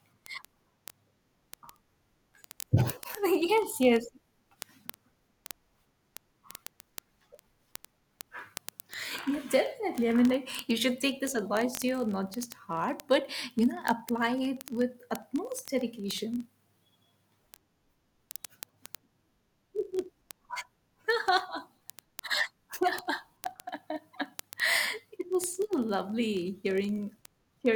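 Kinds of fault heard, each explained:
Word clock ticks: The receiver runs on its own clock, unlocked to the sender's. The two drift apart by about a tenth of a percent. Each slip drops or repeats one sample. Ticks come about every 20 ms, from 0.11 s to the end.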